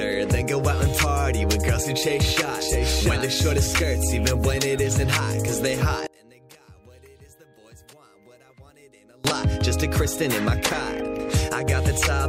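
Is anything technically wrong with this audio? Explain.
Yes. From 6.07 to 9.25 s the sound suddenly collapses, dropping by about 28 dB into a faint remnant before it snaps back. That's most likely one channel inverted: with one stereo side flipped in polarity, everything the two channels share cancels when they're summed to mono. All that's left during that stretch is the small difference between the channels, which is why it sounds so faint.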